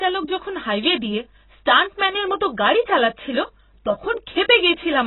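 AAC compression throughout: nothing remains above 4 kHz, and the speech is dull, smeared and warbling, likely from AAC-LC squeezed to a bitrate near 16 kbps.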